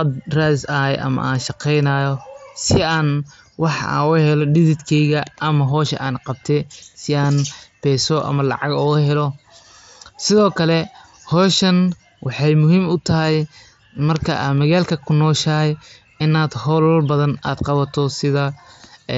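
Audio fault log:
No fault to log.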